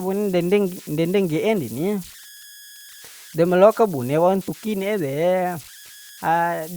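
Throughout the speech, converter idle tones sit under the signal: a whistle around 1.5 kHz, about 23 dB below the speech, most exposed in the pauses and turning into a grainy texture beneath quiet passages. An undithered delta-sigma converter is settling into repeating bit patterns on low-level input, and those cycles emit tones set by the input's offset. A spectrogram shows a thin horizontal line near 1.5 kHz running through the gaps, and the waveform's near-silent stretches carry a fine regular ripple rather than flat noise.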